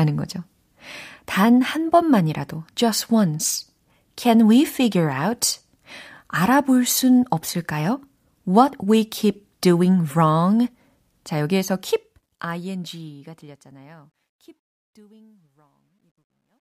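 Speech clip whose fade-out from 11.42 s carries truncation distortion: a 12-bit stage without dither steps the waveform, turning gritty from 14.6 to 16.79 s.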